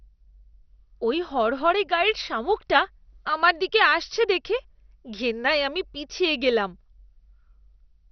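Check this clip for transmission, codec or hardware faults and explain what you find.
There is one codec fault, present throughout the speech: MP2 compression, most likely from an MPEG Layer II encoder run at a low rate, around 48 kbps. Starved of bits, the encoder switches off whole upper sub-bands, so nothing survives above about 6.1 kHz. The bands that remain are quantised coarsely and flicker in and out. The result is dull, muffled speech with a heavy gurgling, granular texture over the whole clip.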